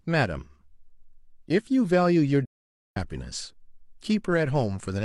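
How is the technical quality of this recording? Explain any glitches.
One glitch stands out. From 2.45 to 2.97 s there is AAC frame loss with muting: about half a second of speech vanishes, which fits roughly a dozen lost frames. The decoder zeroed their spectrum, and overlapping windows fade the sound out and back in. Unlike a hard dropout, the silence has soft edges.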